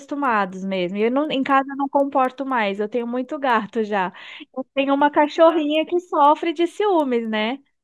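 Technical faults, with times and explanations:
Throughout, resampler restarted on every block: a steady ticking at 4 per second runs under the speech and falls away in the pauses. The ticks mark 250 ms blocks that were each resampled in isolation. At every block edge the converter's filter had no real neighbouring samples to work with, so it left a small discontinuity. The conversion points to a halving of the sample rate, which fits 48 kHz down to 24 kHz.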